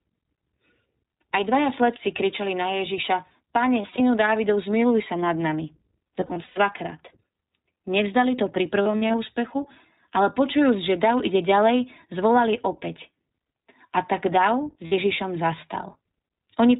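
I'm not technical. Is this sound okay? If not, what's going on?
No. The speech was squeezed through iLBC, the iLBC codec, a compression method built for internet phone calls. It handles sound in small chunks, each about 20 ms long, and throws away everything above 4 kHz to save space. You can plainly hear the result. The speech stays clear but sounds narrow and phone-like, with a slightly rough, synthetic edge on every part of the recording.

There are also lost iLBC frames in four places. Some chunks never arrived, and the decoder filled each gap by repeating the last bit of sound mixed with noise, so you hear a brief held, buzzy or breathy tone. The first is at 3.82 to 4.01 seconds. The second is at 6.20 to 6.58 seconds, right after "sa nad nami", and the third is at 8.82 to 9.15 seconds, right after "to pri". The last is a quick one at 14.86 to 14.93 seconds. The speech recovers almost immediately after each.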